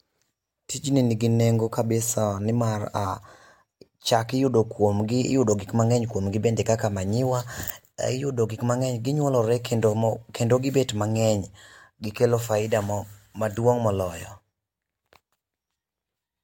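No technical faults can be heard anywhere in the recording.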